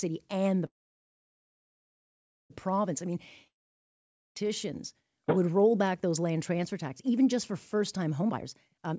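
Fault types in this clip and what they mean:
Call audio freeze: Packets were likely held up and the jitter buffer ran dry after "and the", leaving a fading fill then about 1.8 s of silence before speech resumes intact.
Long network dropout: Audio likely stopped arriving at 3.47 s; a brief fading tail gives way to silence, and about 0.88 s of speech never returns when it resumes at 4.49 s.
Jitter buffer speed-up: The buffer held excess audio, so short pitch-period pieces were cut repeatedly from 8.20 s, making the speech at "you know because" run about 155% fast at unchanged pitch.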